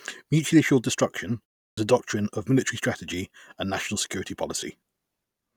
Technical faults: clipped start after a pause

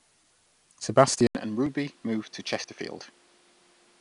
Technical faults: 4-bit ADPCM compression; input switched to a poorer device; audio missing between chunks

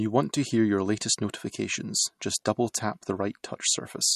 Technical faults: MP3 compression

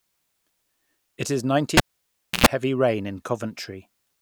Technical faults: cable pulled and plugged in

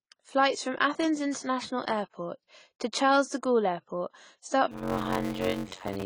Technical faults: AAC compression; block size mismatch (padded)

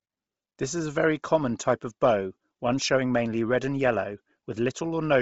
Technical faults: Bluetooth LC3 compression

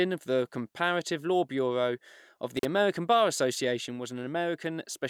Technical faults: intermittent contact

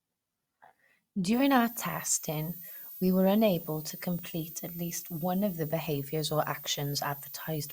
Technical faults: switching supply whistle

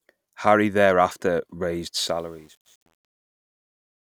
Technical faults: truncation distortion on a fade

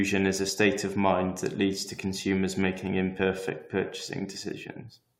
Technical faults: damaged data in a compressed stream

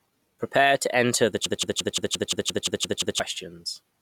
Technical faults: broken-record loop

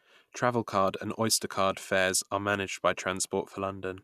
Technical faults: none

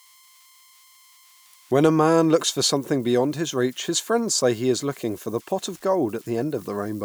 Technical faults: converter idle tones

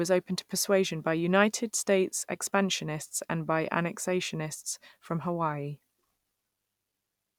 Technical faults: none

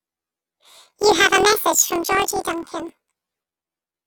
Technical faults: planar audio read as interleaved

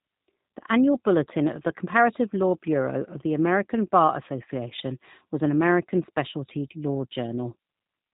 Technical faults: G.729 codec

